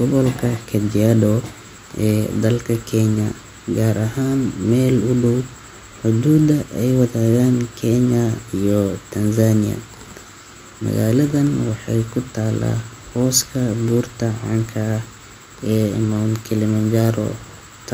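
No technical faults turn up anywhere in this recording of speech, which holds steady throughout with no dropouts, distortion or glitches to report.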